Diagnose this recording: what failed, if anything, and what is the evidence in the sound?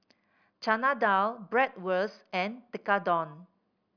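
Nothing failed here; the speech comes through without any audible fault in the chain, so there's no stage to point at and no evidence to chase.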